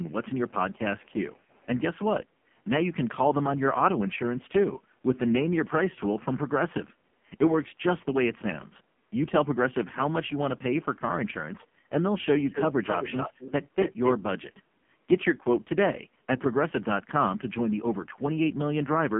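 A speech clip carrying the heavy damage of the AMR narrowband mobile codec throughout: nothing above 3.5 kHz survives, the line band sits around 150 Hz to 3.4 kHz, and the synthetic, buzzy coding texture points to AMR-NB's lowest modes, consistent with a bitrate near 5.15 kbps. From 0.04 to 0.12 s a very quiet delayed copy of the speech arrives about 342 ms late, roughly 35 dB below the main signal. This is likely an echo leak, where a loudspeaker-side echo canceller let some of its microphone pickup return down the line.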